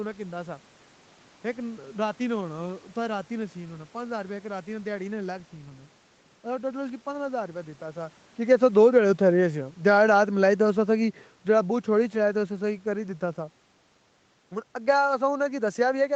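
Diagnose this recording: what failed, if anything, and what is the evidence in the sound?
Automatic gain falling, call processing stage: from 8.45 to 12.48 s, speech and background sink together by about 5 dB as the AGC lowers its gain.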